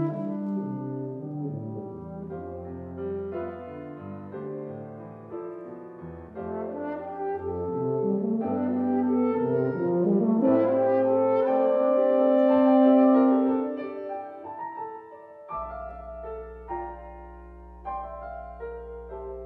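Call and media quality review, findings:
Mains hum, 15.57 s to end of clip (19.45 s). Steady low 60 Hz tone with some low harmonics, roughly 20 dB below the programme. Probable ground loop or nearby transformer coupling the power line into the signal path. Spectrogram: thin constant horizontal line at 60 Hz, lines at 120 and 180 Hz. Waveform: fixed-period ripple riding under the signal.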